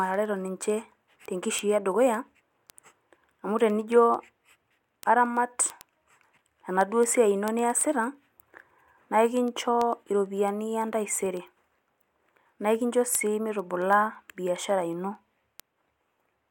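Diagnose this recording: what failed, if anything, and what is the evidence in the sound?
The digital interface's clocking failed. Word clock ticks run from 0.14 s to 16.48 s, about 150 sharp clicks at roughly ten a second. The receiver isn't locked to the sender and drifts a couple of hundred ppm off, so each slip drops or repeats one sample.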